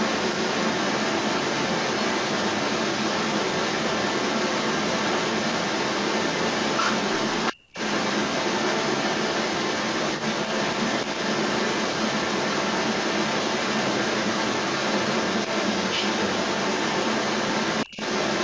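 From 0.0 to 7.56 s, and again from 7.73 to 18.43 s, an echo leak is heard. A delayed copy of the speech trails it by 335 ms, likely from a loudspeaker echo the canceller missed.

At 7.53 to 7.69 s, and again at 17.86 to 17.97 s, there is speech suppressed in double talk. The speech briefly dips, likely as the canceller ducks both sides. The first dip is about 20 dB and the second about 30 dB.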